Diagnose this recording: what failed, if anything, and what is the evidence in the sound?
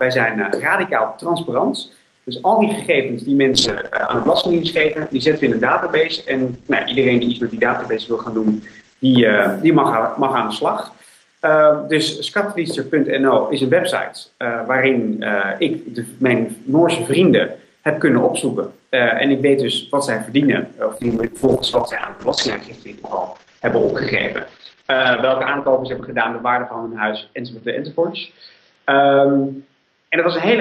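Call bitrate drop at 3.54 to 9.05 s and again from 20.96 s to the end, a network-driven codec fault. The bandwidth estimate fell, so the encoder coded coarsely. The audio turns rough and muffled, top end cut near 8 kHz, then 6 kHz, suggesting about 10 and 8 kbps.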